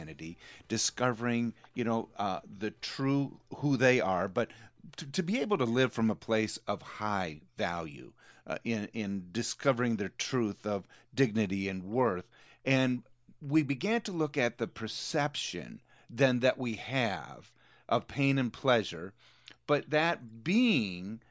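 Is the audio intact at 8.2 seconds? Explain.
Yes, the speech at 8.2 seconds is intact, with no dropout, click, distortion or other fault at that moment.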